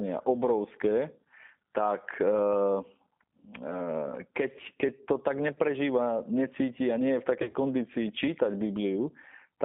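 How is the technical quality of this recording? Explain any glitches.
The technical quality is limited: a narrowband speech codec colours the whole clip, and two short dropouts interrupt it.

Throughout, the speech sounds slightly rough and synthetic, confined to roughly 200 Hz to 3.6 kHz. This points to the G.729 codec at 8 kbit/s, which rebuilds speech from a filter and sparse pulses.

At 5.54 to 5.59 s and 7.42 to 7.56 s, the sound turns into a smeared, buzzy tone or coloured noise that fades. This is VoIP packet loss concealed by the speech codec: the decoder extrapolates from its last frame to fill about 20 ms and then about 90 ms lost in bursts.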